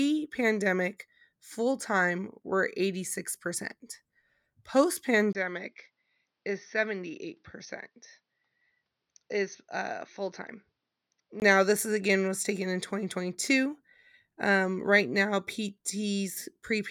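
At 5.33 s a 20 ms gap precedes "this is again was". Until 11.42 s the speech is dull, about 10 dB quieter, empty above 6.3 kHz, with faint new background noise. A new noise floor and level shift, not just tone, point to a likely input switched to a poorer device rather than filtering.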